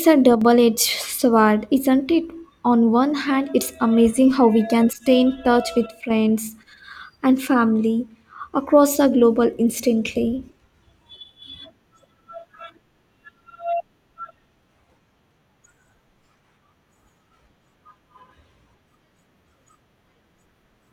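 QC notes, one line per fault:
0.35–0.41 s and 5.86–6.10 s, one channel drops out: the speech suddenly dips by about 6 dB, then snaps back. That fits one stereo side likely cutting out, so the mono sum loses half its shared signal for those brief stretches.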